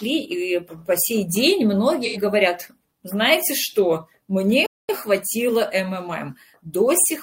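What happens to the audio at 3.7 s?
Nothing goes wrong at 3.7 s; the audio runs through that moment intact, with no dropout, click or other fault.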